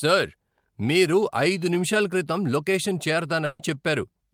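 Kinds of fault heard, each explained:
Burst of packet loss: Around 3.45 to 3.75 s, about 140 ms of speech was lost in transit. The receiver filled the gap by holding the last sound and letting it fade. Speech then picks up further on, with that stretch gone.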